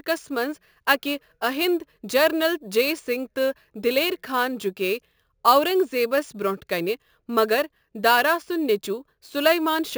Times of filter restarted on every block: none

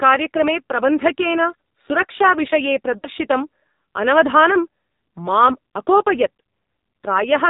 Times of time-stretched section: none

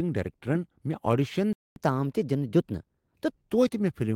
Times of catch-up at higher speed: 1.76-3.30

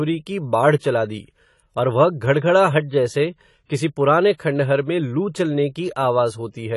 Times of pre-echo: 3.66-3.69, 4.38

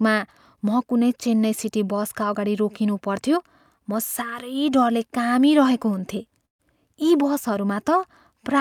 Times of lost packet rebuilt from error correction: 6.17-6.19

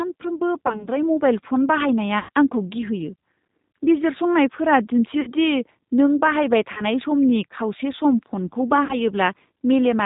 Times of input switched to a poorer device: none

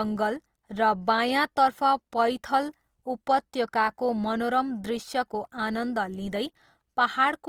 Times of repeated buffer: none

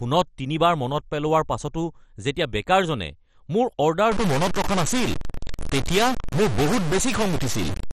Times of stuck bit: 4.12-7.93

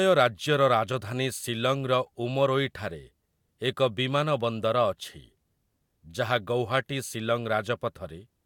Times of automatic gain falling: none

